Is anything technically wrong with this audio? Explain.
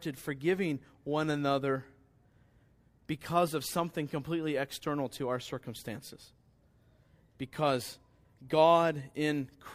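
No, nothing technically wrong can be heard in this speech recording. No fault turns up at any point in the clip.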